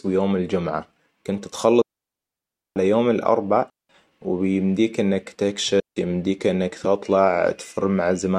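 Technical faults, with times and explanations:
1.82–2.76 s, 3.70–3.89 s and 5.80–5.97 s: digital wireless dropout. The speech cuts to near silence for about 0.94 s after "ويوم الجمعة كنت", then 195 ms after "يوم الاربع" and 168 ms before "يمديك انك". Each hole is clean, with no noise burst at either edge, because the receiver lost too much of the digital stream and muted its output with a very fast fade rather than playing corrupted data.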